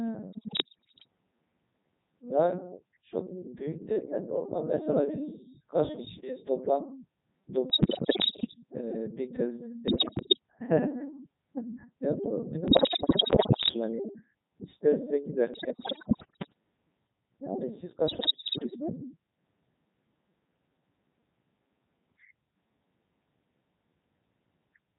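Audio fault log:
Throughout: Codec 2 vocoder. Speech is rebuilt from sine waves using only pitch, voicing, level and envelope, so it sounds heavily robotic and buzzy, which fits the 3.2 kbit/s mode.
0.32–1.08 s, 7.70–8.54 s, 9.88–10.39 s, 12.68–13.74 s, 15.54–16.53 s, 18.08–18.76 s: bit errors on digital voice radio. A large share of bits are corrupted, each reshaping a whole frame, so pitch, level and timbre jump into warbles and bleeps.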